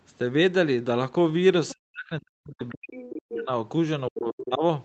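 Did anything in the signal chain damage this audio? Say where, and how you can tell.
Yes. At 1.69–1.73 s and 2.96–3.09 s the other side's voice leaks through in faint scraps, roughly 20 dB under the talker. On a spectrogram they appear as thin, separate harmonic traces. This is likely residual loudspeaker echo that the call's echo canceller did not remove.

The talker's speech is suppressed in double talk from 1.74 to 3.5 s and again from 4.1 to 4.63 s, falling by up to around 40 dB in patches. The waveform envelope collapses in chunks and the spectrogram goes dark there, likely because the echo canceller attenuated everything while the far end spoke.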